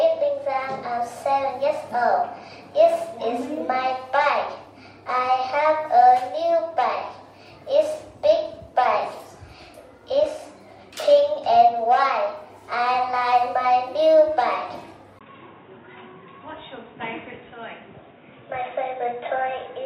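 At 15.19 s a 20 ms gap appears, and from there to the end everything above 3.8 kHz is gone, with a faint new noise floor at a steady level. That is likely the input switched to a poorer device, not a filter change.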